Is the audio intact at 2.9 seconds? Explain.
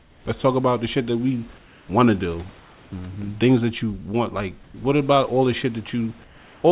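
No. From 2.6 to 2.92 s, just after "we want to do", discontinuous transmission likely filled the pause with comfort noise, replacing the real background with steady, featureless hiss about 1 dB quieter.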